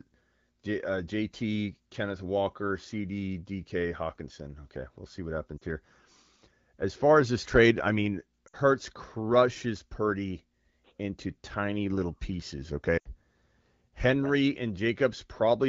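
Lost AMR speech frames occur at 5.58–5.64 s, 8.47–8.56 s and 12.98–13.06 s, gaps of 40, 60 and 80 ms. The decoder repeats the last good pitch and spectral shape at falling gain, so the speech smears and dips briefly before recovering roughly.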